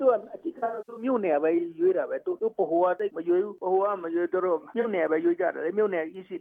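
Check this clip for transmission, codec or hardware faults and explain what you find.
There are two stretches of AAC frame loss with concealment. From 0.58 to 1.04 s, scattered gaps up to about a tenth of a second occur. Another comes at 4.81 to 4.86 s. The decoder patches missing frames from the last good spectrum, leaving smeared, noisy, phasey patches.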